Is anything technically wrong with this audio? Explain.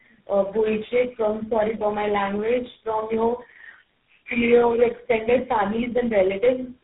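Yes, there's tandem speech coding throughout the speech: the sound points to about three low-rate speech codecs in a row, ending in something like GSM full rate. Each one re-encodes the previous one's damage, so it's rough, muffled and warbly, with nothing above 3.8 kHz.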